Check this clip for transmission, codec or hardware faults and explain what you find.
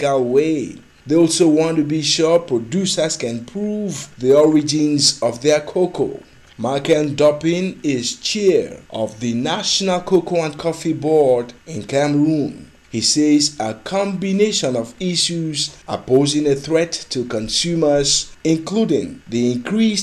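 I found no faults to report in this clip.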